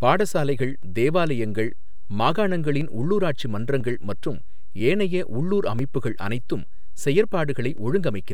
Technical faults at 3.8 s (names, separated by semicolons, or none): DC offset; audio missing between chunks